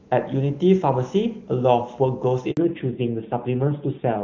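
A handover gap at 2.51 to 2.57 s cuts this speech clip dead for 60 ms, as no speech frames arrive while the call switches networks. Fallback to narrowband follows from 2.57 s to the end: the HD Voice codec, whose earlier audio sounds like high-rate AMR-WB, gives way to a narrowband codec, removing everything above 4 kHz and leaving the speech duller and rougher.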